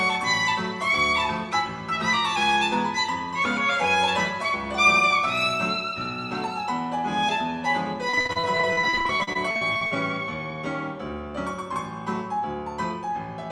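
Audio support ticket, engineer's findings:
Repeated packet loss, 8.09–9.97 s. Choppy sound. Network drops; concealment repeats prior audio over dense short gaps, longest 44 ms, roughly a third of the stretch.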